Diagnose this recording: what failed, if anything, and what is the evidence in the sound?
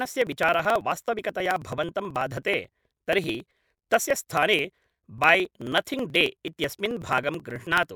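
Periodic USB or driver dropouts at the driver/buffer stage: ticks every 54 ms from 0.05 to 7.88 s, each skipping roughly 10 ms. The strict spacing, unlike random network loss, points to a recurring bus stall.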